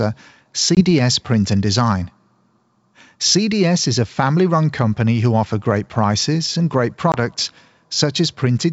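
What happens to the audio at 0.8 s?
At 0.75 to 0.81 s there is packet loss on an ADPCM call. A short stretch of the speech, about 20 ms, drops out to silence with hard edges, which fits a couple of lost packets. The G.722 decoder's predictor and step size keep adapting to the sender's data, so losing that data throws them out of step. When sound returns, it is slightly distorted briefly before the decoder locks back on.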